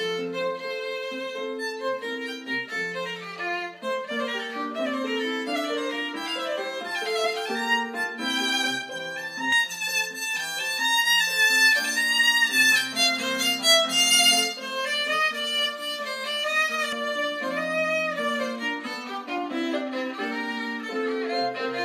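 From 9.52 to 16.93 s, pre-emphasis left on: the J.17 treble boost went uncompensated, lifting 10 kHz about 11 dB over 1 kHz, so the sound turns thin, bright and sibilant.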